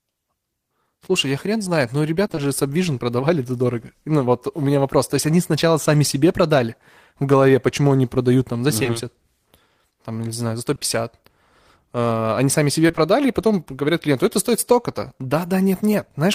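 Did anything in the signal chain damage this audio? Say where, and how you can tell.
Yes, there's network damage. Repeated packet loss (robotic sound) hits at 2.27–2.39 s, right after "я хрен знает но", and again at 12.87–12.99 s. Each has three 20 ms holes, half the span patched, so it turns choppy.

Short concealed packet loss shows up too: a 20 ms smear at 8.83 s after "они продают там за", and two back-to-back 20 ms patches at 10.75–10.83 s after "там не знаю за". The decoder extends the last sound to fill each hole.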